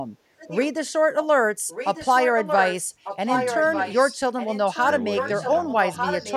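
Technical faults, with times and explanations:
0.38–0.66 s, 1.68–2.83 s, 3.04–4.14 s and 4.39 s to the end: echo leak. A copy of the speech returns 1.2 s late, first about 10 dB under it, then about 5 dB. Likely a loudspeaker side's echo canceller is passing its microphone pickup back.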